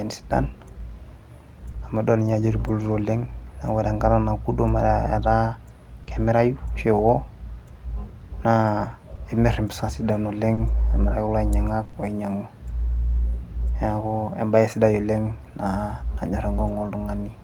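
Speech with network loss. Short concealed packet loss at 1.71 s and 6.03 s briefly smears the sound: about 20 ms is synthesised from the preceding audio, showing as a small repeated or blurred patch on the spectrogram. Each is followed by a lost packet rebuilt from error correction at 1.75–1.89 s, plus another at 2.79–3.01 s and one at 6.07–6.29 s, which fits several separate lost packets. These stretches sound rougher and noisier, with grainier, less defined harmonics on a spectrogram but no gap in the waveform. Between 9.15 and 11.95 s, scattered short gaps, roughly five, the longest around 40 ms, cause brief ticks and hiccups, visible as thin smeared slivers in the spectrogram.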